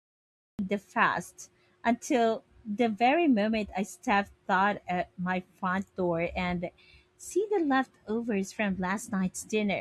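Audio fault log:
0.00–0.59 s, cut-off start: The recording or stream began capturing late, so the first 0.59 s is flat digital silence and the speech enters already in progress at 0.59 s, just before "the fast until the". Because capture started partway through a sound rather than ahead of it, there is no natural onset, breath or rising attack. The level jumps from nothing to full speech in an instant, and the opening syllable arrives truncated.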